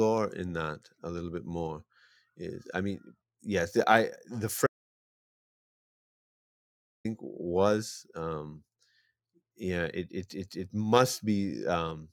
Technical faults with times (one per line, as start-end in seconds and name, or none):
4.67-7.05 audio dropout to silence